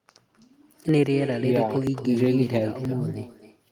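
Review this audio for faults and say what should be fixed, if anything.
Echo with no canceller runs through the whole speech clip. A copy about 11 dB down returns roughly a third of a second after each phrase, so the far end's loudspeaker is feeding its microphone. Enable acoustic echo cancellation at the far end or have that side use a headset.

Audio is missing between chunks at 0.89, 1.87 and 2.85 s. Each skip drops a very short piece, about one per second, likely from fixed 1-second processing blocks losing samples at each boundary. Carry samples across block boundaries with overlapping or double-buffered capture so nothing is dropped at handover.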